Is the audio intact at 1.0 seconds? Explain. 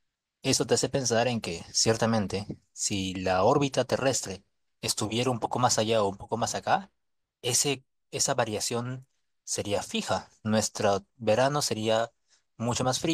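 No. Imaging from linear upsampling spans the whole speech clip: straight-line interpolation from 22 kHz to 44.1 kHz leaves mirror images between 11.03 and 22.05 kHz, about 20 dB down, giving sibilants a faint metallic shimmer.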